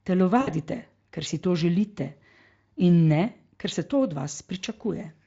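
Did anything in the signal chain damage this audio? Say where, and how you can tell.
Yes, at the network stage. From 0.41 s to about 0.50 s, the speech smears into a buzzy tone or coloured noise that fades. This is VoIP packet loss concealed by the speech codec. Around 60 ms went missing, which fits three 20 ms frames. The Speex decoder repeated its last pitch and filter with falling gain, and recovery lagged briefly after the packets returned.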